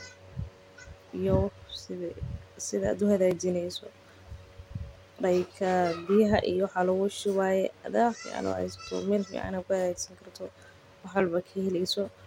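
Speech clip with two blocks of digital silence, at 3.31 s and 11.2 s, lasting 2.29 ms and 4.01 ms. Samples drop abruptly to silence and back, so each gap sounds like a tick.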